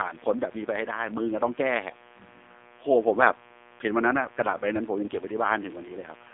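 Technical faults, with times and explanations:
Throughout, mains buzz: a steady, raspy buzz sits roughly 25 dB below the speech. Sharp switching spikes, twice per cycle of 60 Hz mains, produce a dense series of harmonics that extends well into the upper frequencies instead of a pure hum.
Throughout, AMR narrowband mobile codec: the speech is confined to 250 Hz to 3.7 kHz and sounds heavily buzzy and synthetic. The coarse pulse-driven vocal-tract model suggests a low mode near 5.9 kbps, where too few pulses leave the voice thin and artificial.
5.06 to 5.11 s, lost AMR speech frames: a brief dip and warble interrupts the speech. It fits one lost 20 ms frame, which the decoder filled by repeating the last good pitch and vocal-tract settings at reduced gain before the voice returned rough for a moment.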